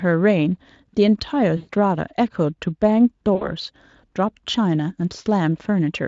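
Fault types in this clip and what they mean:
VoIP packet loss concealed by the speech codec: At 1.57 to 1.69 s and again at 3.35 to 3.52 s the speech smears into a stretched, buzzy tone or coloured noise that fades, and it stays weak or distorted just after each gap. Stretches of about 120 ms and 60 ms of audio never arrived, and the Speex decoder, faint in its own coding damage, filled them by extrapolating its last pitch and filter with falling gain.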